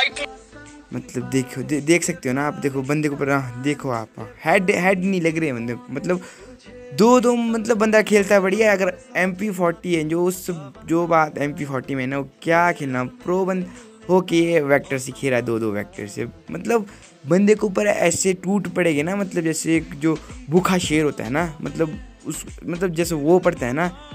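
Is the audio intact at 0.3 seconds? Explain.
Yes, the audio is intact at 0.3 s, with no dropout, click, distortion or other fault at that moment.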